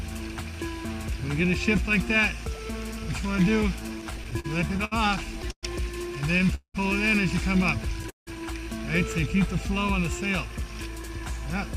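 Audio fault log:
4.01–5.65 s, repeated stalls (stutter): the sound catches and drags in twelve short hitches, the longest about 120 ms, about 313 ms of held-over sound in all, roughly a fifth of this stretch. Nothing drops out. Packets arriving late kept draining the jitter buffer, so the receiver extended the last sound each time.
6.55–6.76 s and 8.10–8.29 s, call audio freeze: the last sound hangs as a fading buzz or hiss, then goes silent for about 90 ms and 140 ms, before resuming where it stopped. The pauses last 193 ms and 169 ms and nothing is lost. The likely cause is packets held up in transit, which emptied the jitter buffer.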